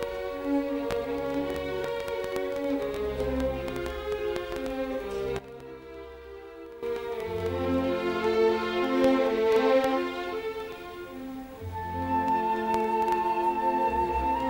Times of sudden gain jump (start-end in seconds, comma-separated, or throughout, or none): 5.39-6.83